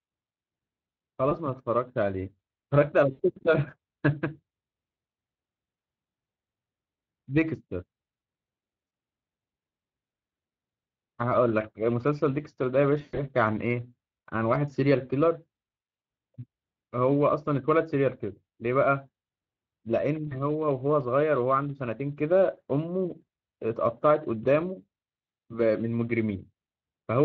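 Throughout, the speech has a grainy, hoarse coarseness. It sounds rough and noisy rather than clean. This is Speex codec damage, plainly audible, which fits a Speex setting of around 20 kbps. The CELP coder has too few bits to rebuild the excitation faithfully.

Over that coarseness, five short dropouts turn into buzzy, fading tones or coloured noise. They fall at 1.29 s (20 ms), from 3.11 to 3.20 s (80 ms), and from 8.87 to 8.91 s (40 ms). The longest comes from 13.01 to 13.19 s, with 140 ms missing in scattered gaps and a longest run of 120 ms. The last is from 20.27 to 20.40 s (40 ms). These are VoIP packet loss concealed by the speech codec. The decoder kept stretching its last pitch and filter with falling gain, so the voice stays weak for a moment after each gap.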